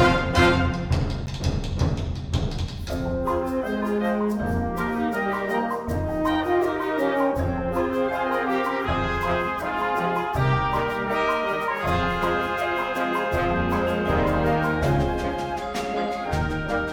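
A block of digital silence hits at 1.26 s. About 10 ms of the audio drops out with no fade, heard as a tick. A late-filled output buffer likely caused it.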